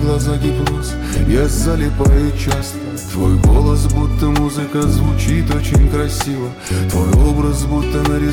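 Nothing in this clip stands out as a technical fault, so there's nothing to flag from beginning to end.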